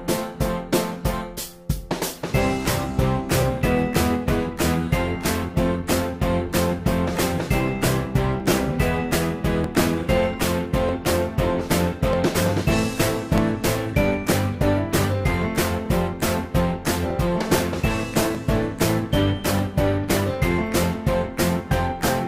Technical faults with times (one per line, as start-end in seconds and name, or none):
0.93-22.08 clock drift buffer slips